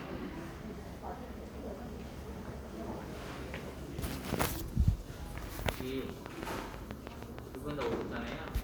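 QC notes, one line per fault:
6.10–8.49 s, train of clicks: about fifteen near-identical pulses arrive at a regular 6.3 per second, ticking well above the sound and audible in pauses too. A steady, mechanical pace like this likely comes from interference from nearby equipment or a faulty connection or power supply injecting the same spike repeatedly.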